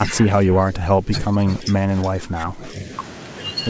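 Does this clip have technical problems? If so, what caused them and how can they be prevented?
Yes. The speech dips in level four times: from 0.06 to 0.18 s (a slight drop of about 5 dB), 0.44 to 1.12 s (the deepest, about 15 dB), 1.33 to 1.88 s and 2.1 to 2.62 s (about 10 dB each). This is likely speech suppressed in double talk, where the echo canceller cannot tell the local talker from the loudspeaker echo while both sides speak, and attenuates everything. Prevention: use a headset or better acoustic isolation, or tune the echo canceller's double-talk detection so it holds off suppression when near-end speech is present.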